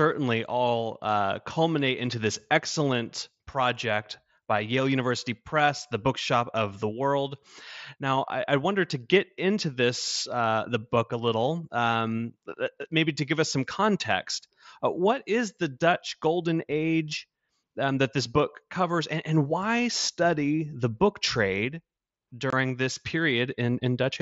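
At 22.50 to 22.53 s, unconcealed Bluetooth headset packet loss cuts a brief hole into the speech. Roughly 22.5 ms vanishes with hard edges, which fits three lost packets over the mSBC link.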